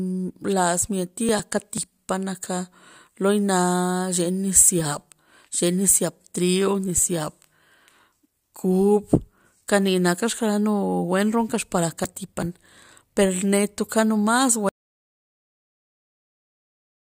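It's a speech clip with two short bursts of processor overload crackle, at 1.29 to 1.78 s and 12.04 to 12.43 s, where the machine kept missing its buffer deadlines and skipped a handful of tiny few-millisecond chunks, leaving gritty tearing. Then at 14.69 s there's an audio dropout to silence that runs to the end, dead silence with no room tone, likely the input getting disconnected or muted mid-recording.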